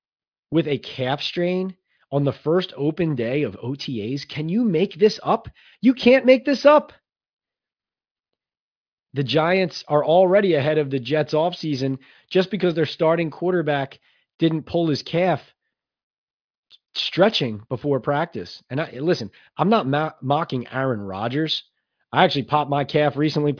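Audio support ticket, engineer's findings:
No faults found on listening to the speech recording. Nothing to escalate.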